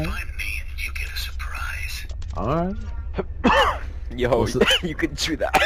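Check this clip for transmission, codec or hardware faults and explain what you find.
One fault is present. From 3.57 s to the end, crude rate conversion repeats samples without filtering, consistent with 44.1 kHz to 48 kHz, leaving a gritty, inharmonic fizz roughly 25 dB below the sound.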